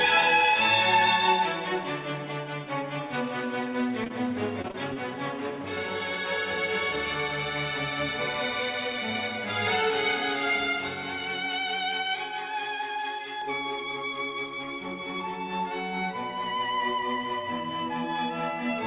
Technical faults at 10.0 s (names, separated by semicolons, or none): pre-emphasis left on